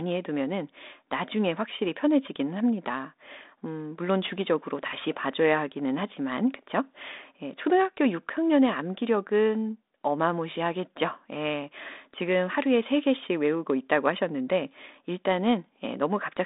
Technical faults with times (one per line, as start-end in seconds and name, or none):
none